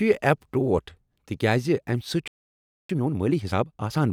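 At 2.28 s the speech cuts out mid-flow and stays silent for about 0.62 s, resuming at 2.89 s: a playback stall, likely the player starving for data or its thread being blocked.

From 2.89 s to 4.01 s comes time-compressed catch-up. The player works off its backlog by trimming small pieces and cross-fading the joins, so the speech runs about 1.5 times faster. The pitch stays normal, which sets it apart from a sped-up resampling fault.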